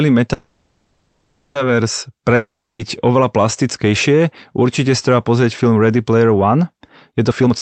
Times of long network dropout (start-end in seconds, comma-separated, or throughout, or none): 2.35-2.81